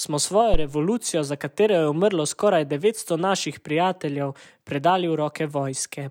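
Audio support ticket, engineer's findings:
Phantom power thump 0.54–0.69 s, after "smo svojo": supply step through input coupling capacitors. Waveform: offset swell peaking about −7 dBFS, 35 ms decay. Spectrogram: low-frequency smear.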